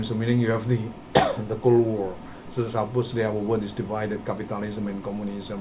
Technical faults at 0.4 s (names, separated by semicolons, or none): none